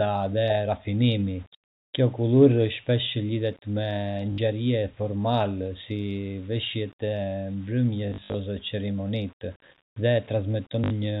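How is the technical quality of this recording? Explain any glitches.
The recording has two faults. A grainy distortion runs through the whole clip, and three short dropouts are patched with repeated audio.

Grainy distortion is present from start to finish. The likely cause is low bit depth without dither. The grain points to about 8 bits, with values rounded to the nearest step. Because no dither was added, the error tracks the signal instead of forming steady hiss. It sits roughly 30 dB below the speech. Quiet passages sound rough and gritty, and the texture shifts as the level changes.

Packet loss with the last packet repeated occurs three times. The first is at 4.32 to 4.38 s and the last at 10.84 to 10.9 s. Each of these replaces 60 ms of audio. The middle event, from 8.1 to 8.34 s, is scattered. About 160 ms is lost across 240 ms, with the longest gap lasting 60 ms. The receiver fills each gap by replaying the last chunk it got. 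The stutter rate fits 20 ms packets. The replays don't align with the pitch. Each run gives a brief robotic buzz.

The telephone coding itself passes cleanly, with nothing heard above 4 kHz.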